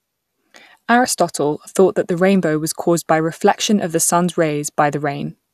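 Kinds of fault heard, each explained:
No technical faults can be heard in this recording.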